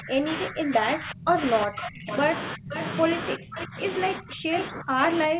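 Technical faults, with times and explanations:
0.0–2.1 s, 2.55–2.74 s, 3.36–3.79 s, 4.18–5.39 s, speech suppressed in double talk: speech drops by about 25 to 35 dB in pieces, likely an echo canceller turning everything down while both sides talked.
2.11–2.16 s, 2.73–2.84 s, 3.60–3.65 s, 4.58–4.64 s, echo leak: brief scraps of speech return 486 ms late, about 10 to 15 dB down, likely loudspeaker pickup the echo canceller missed.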